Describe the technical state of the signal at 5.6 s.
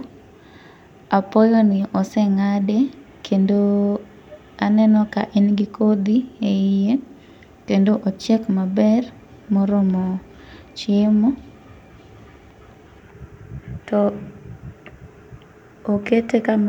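At 5.6 s the speech signal runs intact, with no dropout, distortion, glitch or other technical fault at that point.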